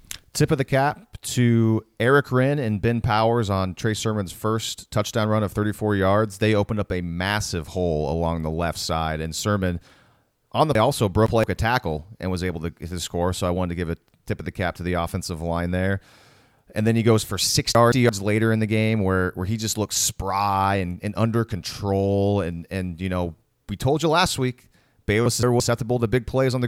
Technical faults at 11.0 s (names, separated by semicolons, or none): chunks out of order